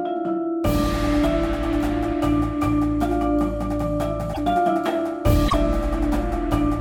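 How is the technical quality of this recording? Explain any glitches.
Two short glitches mar the recording. At 4.33 to 4.38 s and 5.47 to 5.54 s, the audio briefly garbles and skips ahead, about two 26.1 ms frames each. This is likely a broken MP3 bit reservoir: dropped frames leave the next frame reading borrowed data that belongs to another frame. A plain dropout would resume where it stopped, but here the audio lands further on.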